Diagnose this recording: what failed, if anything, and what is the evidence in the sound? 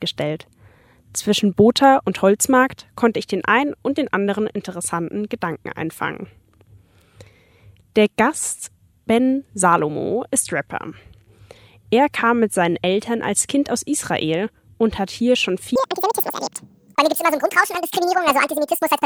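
A section at the wrong speed runs from 15.76 s to the end at 19.05 s. At 15.76 s the sound abruptly turns high and hurried. It plays at 1.95 times its proper rate. The pitch rises by roughly ten semitones, tracking the speed. Speed and pitch shift together at a single point, so this is a rate error, not a pitch effect. The likely stage is playback or editing, where this section was clocked at nearly double its true rate.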